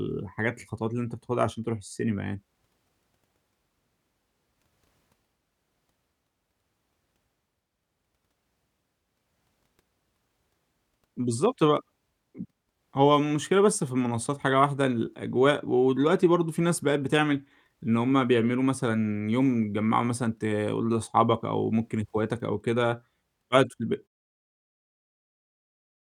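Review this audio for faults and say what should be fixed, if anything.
Nothing stood out on listening to this speech clip, and the gentle fade-out that begins around 24 s and finishes at 24.08 s is a normal edit that needs no fixing.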